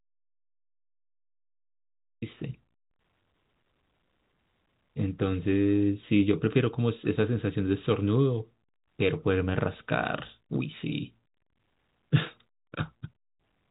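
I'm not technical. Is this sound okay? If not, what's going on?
No. The clip opens with an audio dropout to silence. From the very start until about 2.22 seconds there is complete silence, not even background hiss. The microphone or its connection was likely cut off while recording carried on. Anything said then is lost.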